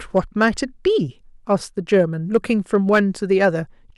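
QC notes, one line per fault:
0.17 to 0.49 s, hard clipping: the speech peaks run about 2 dB past what the signal path can carry, so their tops are sheared flat. The overload is slight, so it sounds like brief crackle on the loudest moments.
1.93 to 3.48 s, hard clipping: the speech is driven about 4 dB over the ceiling, flattening the peaks for longer. The squared-off waveform adds high harmonics, heard as a harsher, gritty fuzz on the louder sounds.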